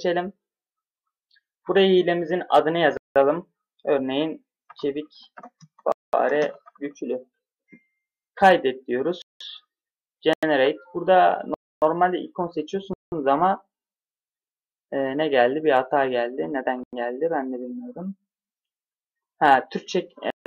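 Blocks of digital silence cut in at 2.97 s (0.19 s), 5.92 s (0.21 s), 9.22 s (0.19 s), 10.33 s (0.09 s), 11.54 s (0.28 s), 12.93 s (0.19 s), 16.84 s (0.09 s) and 20.30 s (0.15 s). Each is an abrupt drop to silence and back, heard as short holes in the sound. This points to output buffers not being filled in time. The recurring 0.19 s and 0.09 s gaps fit missed blocks of 8192 and 4096 samples.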